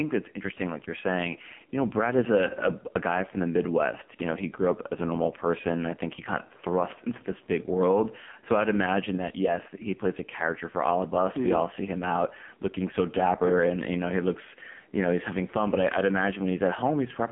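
Gain pumping runs through the whole clip. The gain drops under each loud sound, a swing of about 5 dB. Loud and soft parts sit close in level. The likely cause is input gain set far too high, with a fast limiter pulling it down.

The AMR narrowband mobile codec also colours the entire clip. The band runs from about 150 Hz to 3.5 kHz, and nothing passes above 3.6 kHz. The speech sounds buzzy and synthetic, with heavy damage that points to a low bitrate near 6 kbps.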